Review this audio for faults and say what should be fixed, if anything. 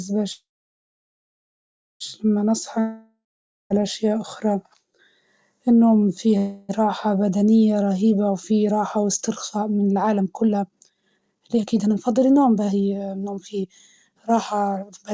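Call audio freeze, 0.32 to 2.02 s and 6.38 to 6.71 s. In the first, the last sound carries on as a fading buzz and then drops to silence for about 1.55 s of the 1.68 s gap. The shorter 0.31 s event stays filled with buzz throughout. The likely cause is delayed packets leaving the jitter buffer empty. Playback then resumes where it stopped, so no speech is lost, but the delay grows by 1.68 s and 0.31 s.

Long network dropout, 2.80 to 3.72 s. The speech trails off into a fading buzz, and about 0.47 s of silence follows. When the audio returns, roughly 0.9 s of speech has been skipped rather than delayed. This points to a likely stretch where no packets arrived at all, so the receiver could only conceal the gap and then jump ahead to live audio.

Jitter buffer speed-up, 8.51 to 15.13 s. The speech runs at 129% of normal speed while the pitch stays the same, which gives it a hurried, clipped pace. 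After the earlier freezes had built up extra delay, the receiver drained the backlog by repeatedly cutting out short pitch-period slices, roughly 2 s of audio in total. The G.722 call band ends at 8 kHz throughout.

To prevent these faults, stabilise the network path to cut packet delay and loss, and let the jitter buffer shed built-up delay more gradually or during pauses.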